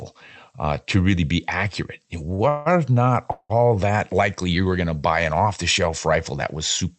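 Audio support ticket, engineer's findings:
Short stall from a late packet, 2.35 to 2.41 s: speech held about 42 ms with slight buzz or dip. Jitter buffer ran dry; receiver stretched the last sound, then resumed, with nothing lost.

Call audio freeze, 2.49 to 2.68 s and 3.32 to 3.51 s: sound continues as a fading buzz or hiss for about 170 ms and 178 ms. The second ends in about 40 ms of silence. Likely packets delayed in transit emptying the jitter buffer. Speech resumes where it stopped, so gaps are inserted rather than audio dropped.

Opus call path audible only as its usual coding noise and top end limited to about 8 kHz.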